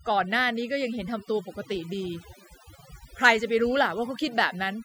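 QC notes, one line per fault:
Throughout: overdone noise removal. The noise reduction was pushed too hard on a noisy take, so individual frequency bands near the noise estimate get pulled right down, taking quiet parts of the speech with them. You get an almost dead background with twinkly specks.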